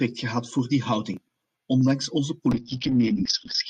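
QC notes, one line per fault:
2.53 s to end: call bitrate drop. Coding falls from 40 to 7 kbps. Highs above 6 kHz vanish, so speech turns coarse and muffled.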